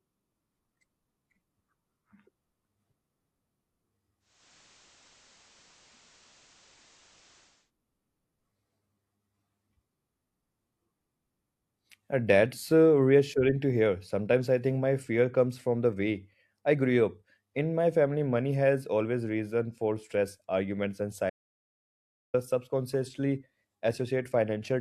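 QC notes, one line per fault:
4.2–7.7 s, digital radio blending to analogue: a 356 ms cross-fade to FM brings hiss roughly 30 dB down, with no level change.
21.30–22.34 s, audio dropout to silence: after "for stress arguments and", sound cuts to silence for 1.04 s with no room tone, likely from a lost input.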